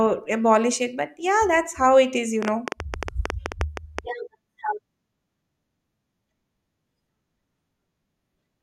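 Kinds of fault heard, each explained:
Train of clicks: a burst of near-identical sharp pulses from about 2.43 to 4.0 s, roughly fifteen of them at close to 9.6 per second but unevenly spaced, standing well above the speech and audible in the gaps too. Their matching shape and fixed span set them apart from random vinyl-style crackle or a single isolated click. The likely cause is electrical interference or a faltering interface injecting repeated pulses.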